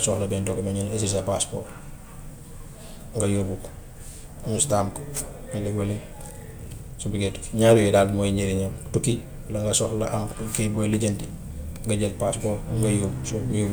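At 3.56 s the speech is interrupted by a bit error spike: a single sample whose value has been knocked far off by one flipped bit, then snaps straight back on the next sample. It sounds like one hard, bright tick, broadband and unrelated to the speech around it. Unlike a dropout click, there is no gap or silence, and unlike clipping, it does not follow loud peaks. It is one isolated instant.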